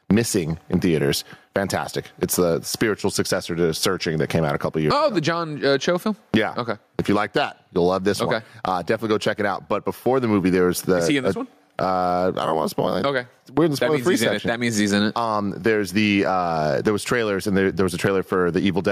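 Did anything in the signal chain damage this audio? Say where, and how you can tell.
Yes, there's gain pumping right through the speech. The gain swings by around 20 dB, and everything sounds squashed. Likely cause: input gain set far too high, with a fast limiter or compressor dragging it back down on every peak.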